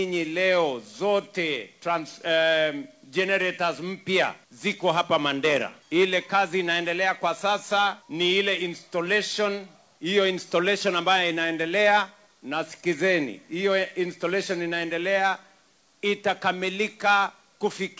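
No faults can be heard anywhere in this audio.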